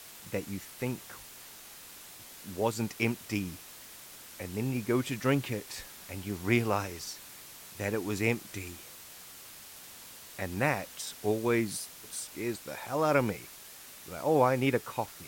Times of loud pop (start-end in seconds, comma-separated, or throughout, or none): none